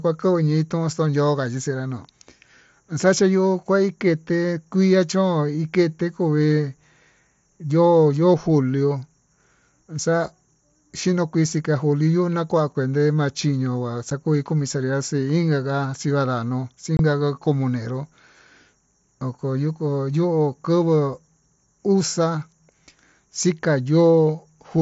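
It's a speech recording with two spots of unconcealed Bluetooth headset packet loss. At 14.10 s there's a tiny hole, about 7.5 ms, which fits one lost audio frame. From 16.97 to 16.99 s a longer gap, about 22.5 ms, points to three frames going missing in a row. Nothing patched them over, so the voice just drops out and snaps back with hard edges. On the mSBC wideband link you can still hear the light graininess in the speech.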